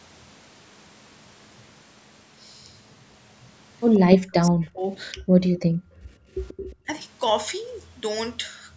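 At 3.94 to 3.99 s a faint delayed copy of the speech surfaces, about 136 ms behind and about 20 dB down. It recurs at 6.46 to 6.54 s (about 25 dB down) and 6.71 to 6.75 s (about 35 dB down). This is echo leak, likely from a loudspeaker path the far-end echo canceller failed to fully remove.

Between those scraps, from 4.0 to 4.92 s, 5.13 to 5.53 s and 5.89 to 6.06 s, the main talker dips and chops out. The deepest cut is roughly 40 dB in the first stretch and around 20 dB in the others. This is speech suppressed in double talk: the canceller likely confused near-end speech with echo and attenuated both.

From 7.01 s onward pre-emphasis is left on. The treble boost was applied without the matching de-emphasis, following a J.17-type curve with about 11 dB more gain at 10 kHz than at 1 kHz. The speech turns thin, bright and hissy on sibilants.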